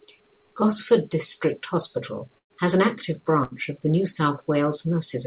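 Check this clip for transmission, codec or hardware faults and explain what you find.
Two short dropouts break up the speech, at 2.38 to 2.52 s and at 3.44 to 3.53 s. Each is a burst of packet loss. Instead of a clean cut, the last sound is stretched out and fades down, for about 116 ms the first time and 75 ms the second. Then the speech picks up further along, with roughly 120 ms and 80 ms of content gone. That fill is the receiver's loss concealment bridging packets that never arrived in time, on a narrowband call path that fits G.711 at 64 kbps, with nothing above 4 kHz.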